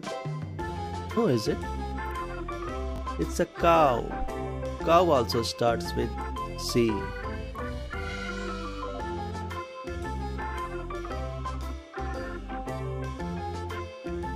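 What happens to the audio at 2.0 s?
Nothing goes wrong at 2.0 s; the audio plays through that moment intact, with no audible fault.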